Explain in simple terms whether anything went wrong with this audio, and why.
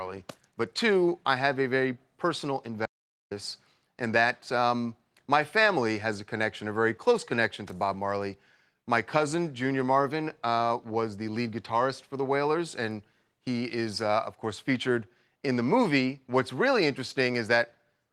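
Something did go wrong. At 2.86 s the speech suddenly stops dead and only comes back at 3.31 s, leaving a gap of about 0.45 s. This is an audio dropout to silence. The input was likely cut off for a moment, perhaps by a loose connection or a brief mute, while recording carried on. Unlike a natural pause, where faint room background stays audible, this gap is completely empty, and whatever was said during it is lost.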